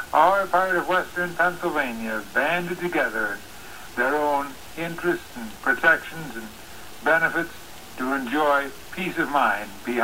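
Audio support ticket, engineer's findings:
Grainy distortion throughout, tracking the sound; quiet passages go gritty, quietest ones sputter or drop out. Likely low bit depth without dither in the export stage: truncated to 7 bits, error only around 25 dB under the signal.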